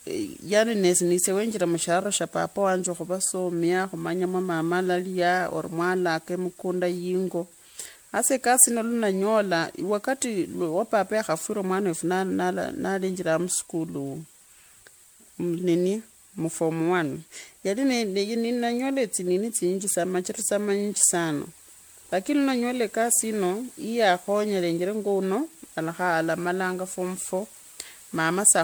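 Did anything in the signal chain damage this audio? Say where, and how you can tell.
Yes. The damage sits at the codec stage, and the likely cause is generation loss: the speech appears to have been pushed through a lossy MP3 encoder about seven times, with a character that fits roughly 96 kbit/s. Each re-encode quantises on a fresh frame grid, so noise and spectral gaps accumulate. Across the whole clip the speech sounds swirly, hollow and smeared, and consonant attacks blur, even though content still reaches about 20.1 kHz.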